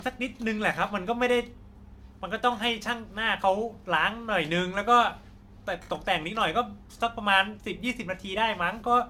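Throughout the speech, the sound is swirly, hollow and smeared, and consonant attacks blur. The likely cause is generation loss: repeated lossy encoding, about four passes, fitting AAC-LC at 96 kbit/s. Each pass requantises on a shifted frame grid, so noise and spectral holes accumulate.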